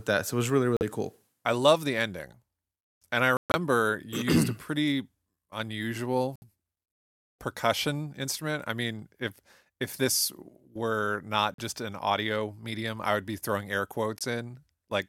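The speech cuts to silence five times, at 0.77, 3.37 to 3.55, 6.36, 11.54 and 14.19 s. The edges are abrupt or fade over a few milliseconds. Speech resumes further on, as if it had kept playing. This is likely a Bluetooth dropout, with late packets discarded.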